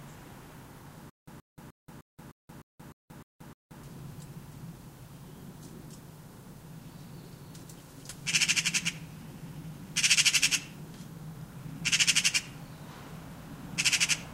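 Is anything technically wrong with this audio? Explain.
Yes. From 1.10 to 3.83 s there is a stutter with silent gaps. The same 126 ms burst plays nine times, each followed by about 179 ms of dead silence, repeating every 304 ms. The likely cause is a stalled player or stream replaying its last buffered fragment at each retry, and the sound that should have filled that span is lost. A waveform shows identical blocks separated by flat silent stretches. A spectrogram shows repeated vertical slabs with empty columns between them.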